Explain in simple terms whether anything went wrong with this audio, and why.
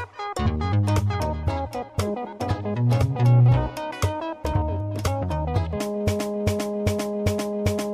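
A broken-record loop starts at 6.19 s: a 0.4-second piece repeats four times to the end, likely because playback stalled and kept resending its last fragment.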